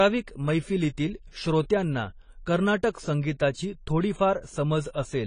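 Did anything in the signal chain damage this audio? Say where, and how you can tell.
Yes. The damage sits at the codec stage, and it runs through the whole clip. There is no content above 10 kHz, so the speech sounds dull and closed in. Sibilants come out smeared and fizzy, and there is a warble on sustained sounds. The likely cause is AAC compression, AAC-LC at a low bitrate that fits about 24 kbps. With so few bits, the encoder lowers its cut-off. It also quantises the remaining bands coarsely, leaving gaps.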